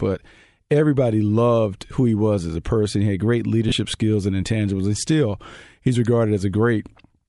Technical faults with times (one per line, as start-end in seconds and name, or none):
0.00-7.29 Bluetooth LC3 compression
3.69-3.72 lost LE Audio frames